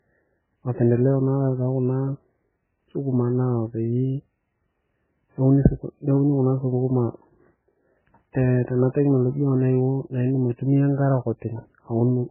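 Heavy MP3 compression, likely at a very low bitrate, runs throughout this speech recording. Short of bits, the encoder has cut everything above 3 kHz and zeroed weak frequency lines, so the sound is dull, watery and swirling, with smeared attacks, consistent with roughly 8 kbps.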